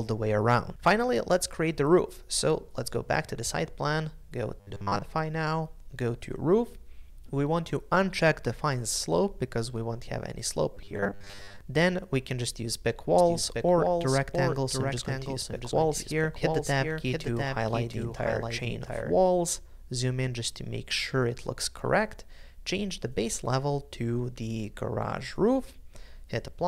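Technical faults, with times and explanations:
4.60–5.02 s and 10.75–11.61 s, robotic sound from repeated short buffers: in both spans the audio takes on a rigid metallic buzz at 100 Hz while the original contour is only loosely followed. This is likely caused by new audio arriving too late, so a 10 ms slice was looped to fill the gap, with most of the span being repeats and the real material skipped. On a spectrogram this shows as evenly spaced horizontal harmonics every 100 Hz. The waveform shows identical 10 ms cycles repeating.
13.18–19.16 s, doubled audio track: a second full-band copy of the audio runs roughly 0.7 s behind the original at about 5 dB lower. It has no decay or room colouring, and it switches on and off abruptly at the edges of that span. It is likely caused by a slower second capture path or two out-of-step copies left in an edit. On a spectrogram every feature reappears about 0.7 s later, slightly fainter, with hard vertical edges where the copy starts and stops.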